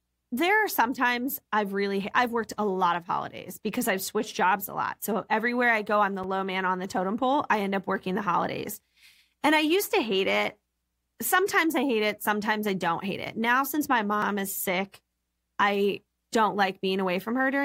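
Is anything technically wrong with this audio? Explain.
Yes. The speech contains two blocks of digital silence: one at 6.24 s lasting about 5 ms, and one at 14.22 s lasting about 3 ms. Their lengths fit a 256-sample and a 128-sample block. In each, the audio was replaced by silence, most plausibly because the output buffer wasn't filled in time. The signal stops and restarts with no fade, so each gap is heard as a tick or dip. Unlike a lone click from a waveform jump, a true hole sits between the two edges.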